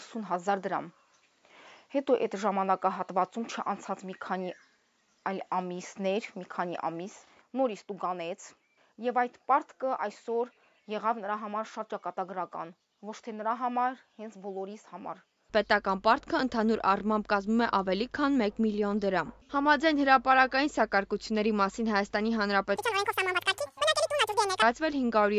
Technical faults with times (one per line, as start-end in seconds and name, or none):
22.76-24.62 wrong sample rate